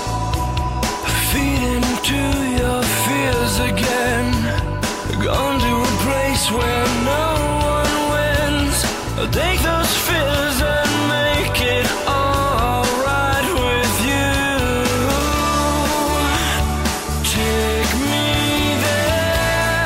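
No technical faults can be heard anywhere in the audio. At no point does anything interrupt or alter the sound.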